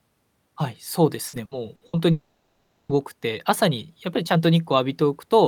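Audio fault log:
1.27–1.96 s, repeated packet loss (robotic sound): Several short holes, the longest about 60 ms, are each patched by repeating the preceding sound, so roughly a third of this stretch is filler. The result is choppy, with pieces missing. On a spectrogram, harmonics repeat as smeared, blocky copies.
2.11–2.92 s, long network dropout: Nearly 0.8 s of sound is replaced by a continuation of the last sound, which decays into buzz and hiss before the audio resumes with a piece missing. The cause is likely an interruption in arriving audio. A spectrogram shows a static, fading smear.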